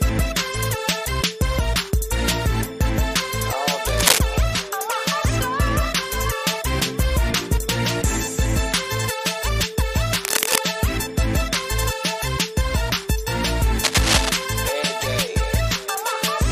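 Three bursts of cable scratch noise break in over the sound. The first runs from 3.89 to 4.19 s and is the loudest, rising above the signal. The second spans 10.24 to 10.58 s, and the third 13.84 to 14.29 s, both sitting at about the signal's own level. Each is a dense, ragged rustle. The likely cause is a worn cable or connector being moved, its contact resistance jumping rapidly.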